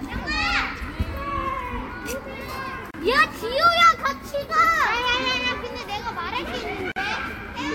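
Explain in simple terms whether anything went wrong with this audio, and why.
Two brief dropouts interrupt the sound, at 2.91 s (about 32 ms) and 6.92 s (about 44 ms): a gap at a join of encoded pieces, where separately encoded sections kept their padding silence.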